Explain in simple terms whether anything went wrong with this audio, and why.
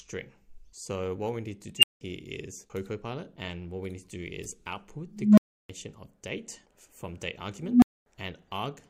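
A tone swells into a loud high squeal at 1.77 s, and into lower tones at 5.10 and 7.60 s, each followed by brief silence. This is an unstable filter: its feedback grew without limit until the numbers overflowed and it reset.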